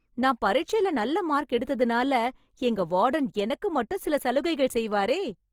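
Throughout the speech, the sound is rough and grainy, with noisy fill in the upper bands, while content still reaches 20.4 kHz. This is likely Opus compression in CELT mode: a bitrate consistent with 24 kbps forces bands to be filled with folded or synthetic noise.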